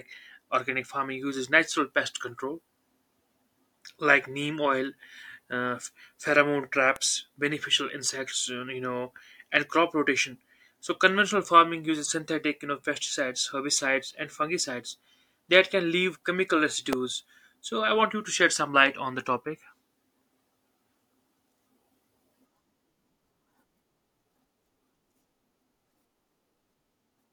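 A nearby switch, motor or static discharge likely arced and induced short bursts into the audio line, producing two electrical switching spikes in the speech. At 6.96 s a single sharp snap cuts across the sound, peaking around -15 dBFS. At 16.93 s a louder one follows, near -10 dBFS, a tight crack lasting only a few milliseconds. Each sits on top of the speech as an abrupt click with no relation to what is being said.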